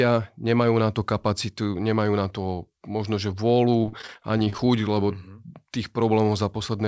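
From 3.82 to 4.6 s there's repeated packet loss, and it turns robotic: a burst of short holes, none longer than about 35 ms, each patched by stretching the last bit of sound. Roughly a quarter of that stretch is concealed, so it comes out choppy, with the G.722-style call path capping everything at 8 kHz.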